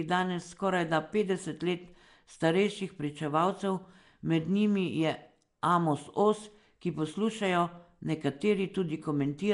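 A speech clip with codec damage running from start to finish. The sound has a rough, hissy halo around it. It also has a smeared, underwater quality. Nothing is present above about 10.6 kHz. This is likely Nellymoser compression, the old Flash microphone codec. It spends a fixed two bits per sample on short blocks. Weak bands get no bits and are filled with noise, hence the hiss. The damage fits a rate of around 44 kbps.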